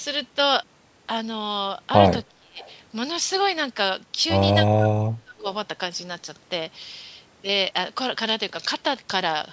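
From 2.28 to 2.63 s the speech dips by roughly 25 dB. This is speech suppressed in double talk, likely from an echo canceller turning the talker down while the far side spoke. At 2.6 to 2.74 s a faint copy about 30 dB down trails the voice by 312 ms, likely an echo leak from a loudspeaker. From 4.75 to 5.46 s the speech sinks again, by roughly 30 dB, in the same double-talk suppression.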